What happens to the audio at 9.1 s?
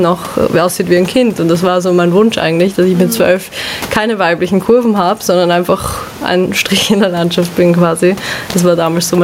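Gain pumping is present at 9.1 s, as it is throughout the speech. The level breathes, with a swing of roughly 15 dB, and the room noise sits about 30 dB below the speech. The likely cause is microphone gain set far too high, with a fast limiter or compressor repeatedly clamping it down, flattening loud and quiet passages into a squashed, pumping sound.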